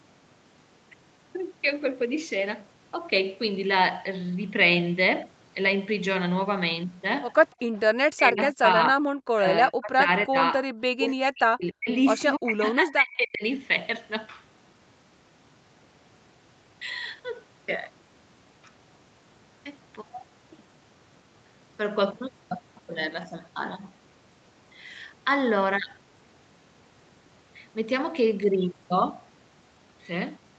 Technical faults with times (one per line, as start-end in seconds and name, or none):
8.15-9.04 speech suppressed in double talk
9.34-10.37 speech suppressed in double talk
10.62-11.88 speech suppressed in double talk
12.38-13.43 speech suppressed in double talk